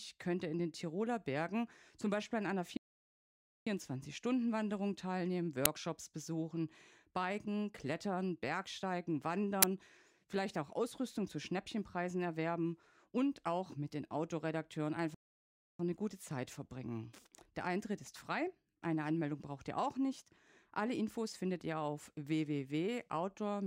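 At 2.77 s, right after "an einer", the speech cuts to silence for about 0.89 s and resumes at 3.67 s. This is a playback stall, most likely because the player ran short of data or its audio thread was held up, so nothing reached the output until it caught up.

At 5.65 s and again at 9.62 s, a loud crack lasting about 10 ms cuts across the speech. Each is an uninitialised buffer: a block was sent to the output before any audio had been written into it, so whatever values were left in memory played as samples, giving that abrupt crack.

A second playback stall falls between 15.14 s and 15.80 s. The sound drops out for about 0.65 s before continuing with "eine gute". The likely cause is again the player being starved of data or blocked, leaving the output silent until it recovered.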